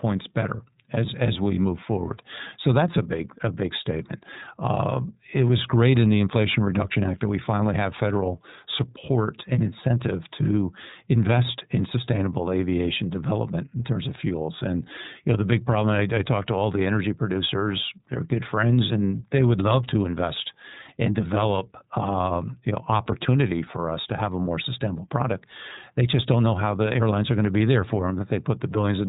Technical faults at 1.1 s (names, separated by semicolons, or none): iLBC codec